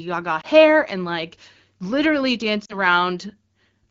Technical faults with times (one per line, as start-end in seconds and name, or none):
0.41-0.46 lost AMR speech frames
2.65-2.77 lost AMR speech frames